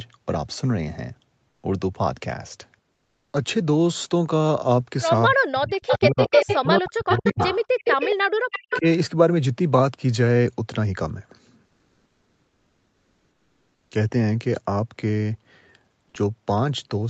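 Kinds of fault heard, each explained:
Comfort noise in place of the background: In two pauses, the real background gives way to a steady, featureless hiss. It lasts 140 ms at 1.49 s and about 2.3 s from 11.65 to 13.91 s. The background there sits about 50 dB below the loudest sound. The fill is about 1 to 2 dB quieter than what it replaces. The likely cause is Opus discontinuous transmission, with the receiver synthesising noise while the sender is silent.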